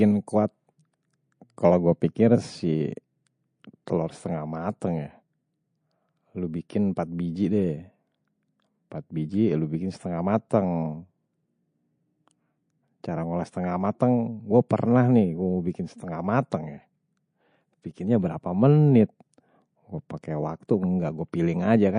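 Speech with plainly audible MP3 compression damage throughout: watery swirling artefacts and metallic chirps on s sounds, likely from low-bitrate encoding around 40 kbps.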